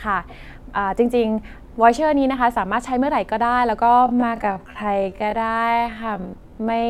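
From 3.9 s to the end of this speech clip, the pace abruptly drops to about half speed (0.52x) while pitch holds steady, so the speech drags. This time-stretched section likely comes from software lengthening the audio by repeating short pieces.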